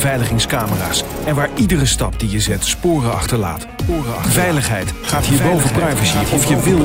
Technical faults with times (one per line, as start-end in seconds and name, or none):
3.89-6.84 doubled audio track